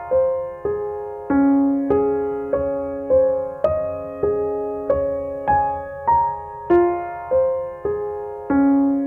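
A music clip with brief hard clipping on its loudest peaks, at 1.91 s, 3.65 s, 4.90 s and from 6.71 to 6.76 s. The signal overshoots the level some stage can pass, by about 1 dB at most points and about 2 dB at 3.65 s, so the peak tops are sliced flat. Those flat tops add high harmonics heard as short crackles. Unlike clicks, they sit only on loud transients, and unlike soft saturation they sound abrupt and gritty rather than warm.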